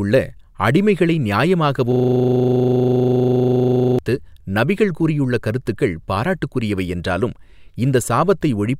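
This speech clip has a system hang loop from 1.92 to 3.99 s. One 40 ms slice of audio repeats about fifty times, giving a rattling buzz at 25 Hz. The system froze while the hardware replayed its buffer. Normal sound resumes before "நபிகள் கூறியுள்ள கருத்துக்கள் பாராட்டுக்குரியவை".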